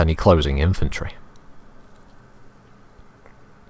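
Nothing goes wrong here; the audio comes over an ordinary call connection, and the way the top end stops at 8 kHz fits a wideband call codec such as G.722 running at 64 kbps.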